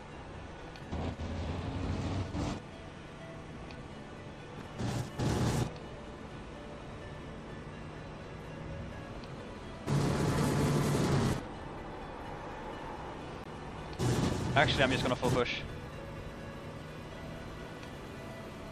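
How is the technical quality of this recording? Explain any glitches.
There is one glitch, a CD skip at 13.44 s. The laser jumped to another turn of the disc's spiral, so the player muted for roughly 15 ms and resumed elsewhere, heard as a tick and abrupt discontinuity. Unlike a plain dropout, the audio doesn't pick up where it left off.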